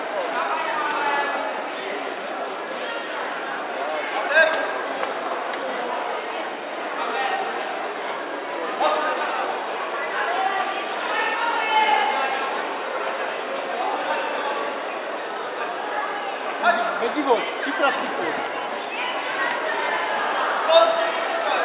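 No technical faults can be heard anywhere in this clip.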